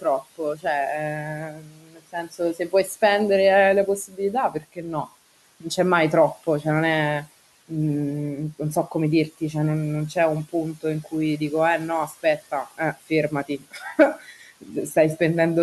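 Speech cut by the noise suppressor, at 0.01–0.66, 1.23–2.91, 4.08–5.08, 10.49–11.41 and 12.08–14.96 s: the suppressor mistook parts of the speech for the room noise, which sits about 20 dB below the speech, and turned them down by about 16 to 19 dB. Syllables sound swallowed or faint for a fraction of a second to about a second at a time.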